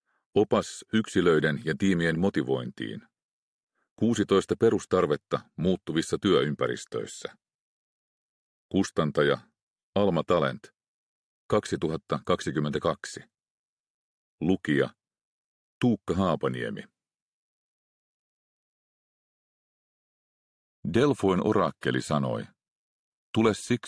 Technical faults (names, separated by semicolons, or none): none